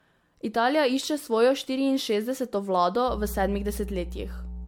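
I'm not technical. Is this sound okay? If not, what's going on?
No. Two things are wrong. First, the speech sounds swirly, smeared and a bit hollow throughout, and sharp starts of sounds are blurred. This is generation loss. The recording was likely squeezed into a compressed format and unpacked again, about seven times over, and each round added more damage.

Second, from 3.06 s to the end, a steady low buzz appears under the speech. This is mains hum, a tone at 60 Hz leaking in from the power supply, often through a grounding problem. It is fairly loud compared with the speech.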